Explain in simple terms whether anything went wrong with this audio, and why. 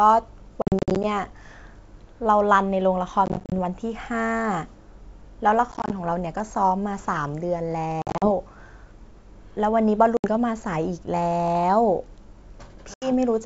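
Something did go wrong. The sound keeps breaking up because of packet loss on an ADPCM call. Small chunks of audio went missing and were replaced by silence. The dropouts come at 0.62 to 1.05 s, 3.26 to 3.53 s, 5.72 to 5.92 s, 8.02 to 8.29 s, 10.17 to 10.27 s and 12.94 to 13.12 s. In the first four bursts each gap is short, up to about 50 ms. After a gap, the receiver briefly loses track of the sender, so the speech can return with a click or at the wrong loudness. The wideband G.722 coding keeps the speech clear between the gaps.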